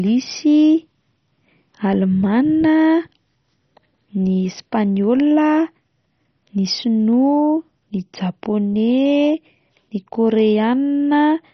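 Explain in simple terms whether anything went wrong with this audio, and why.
The speech sounds dull and muffled all the way through, with a gurgly, grainy edge, and nothing comes through above about 6.1 kHz. That's likely heavy MP2 compression: the encoder, starved of detail, switched off the top bands and roughly approximated the rest.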